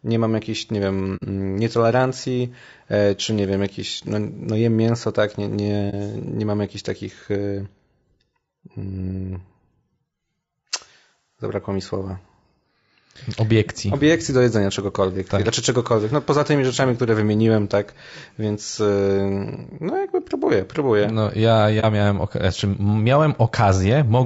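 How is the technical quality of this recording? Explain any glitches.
The recording is hampered by constant codec roughness and three brief dropouts.

Throughout, the speech sounds rough and grainy, with noise filling the gaps between harmonics and a thin, synthetic-sounding top band. This is likely low-delay AAC compression (AAC-ELD), whose short frames resolve pitch harmonics poorly. At what sounds like roughly 32 kbps, a spectrogram shows smeared harmonics and a patchy high band.

There is AAC frame loss with muting at 1.16–1.24 s, just after "mam jakiejś nie wiem", at 5.90–5.94 s after "jem mięso tak nie", and at 21.80–21.85 s just before "miałem znaczy". Each time the decoder zeroed the missing spectrum, leaving a soft-edged gap of about 60 ms in the first case, which fits two lost frames, and about 30 ms in the others. In the waveform the amplitude tapers smoothly down and back. A spectrogram shows a narrow, full-band blank column.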